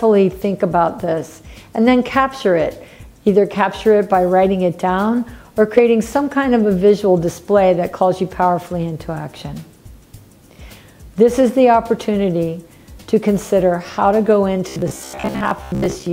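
From 14.69 s to the end at 16.13 s, the sound turns hard and metallic, with a fixed buzz near 66.7 Hz underneath it that stays steady while the rest still moves. This is robotic sound from repeated short buffers, likely caused by audio arriving too slowly. Each gap appears to be filled by replaying the last 15 ms or so, which sets that buzz pitch. Roughly half of the audio in that stretch is repeats rather than new material.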